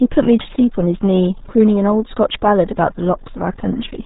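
From the first moment to the last, the speech carries the signature of the RealAudio 14.4 codec, and the damage is heavy. Nothing gets through above about 3.8 kHz, so the consonants lose their edges and everything sounds muffled, as if heard through a wall. Squeezing speech into so few bits also leaves a gargly, watery quality on the vowels, which fits the roughly 8 kbit/s rate this old dial-up codec was built for.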